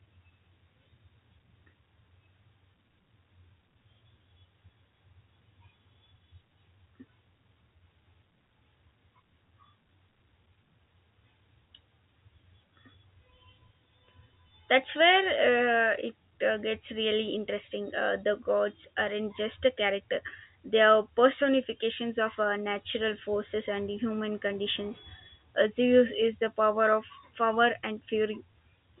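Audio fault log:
No fault to log.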